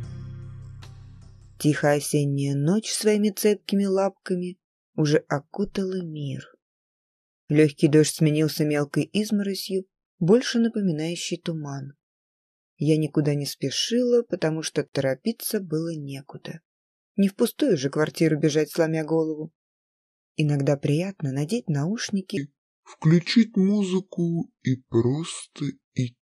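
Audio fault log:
14.88–14.93 s: gap at a join of encoded pieces. A 49 ms gap with smeared edges breaks continuous sound; untrimmed encoder delay and padding remain between separately encoded pieces.
22.37 s to end: section at the wrong speed. Playback runs at 0.729x, dropping pitch roughly five semitones and slowing everything, likely from the section being clocked at the wrong rate.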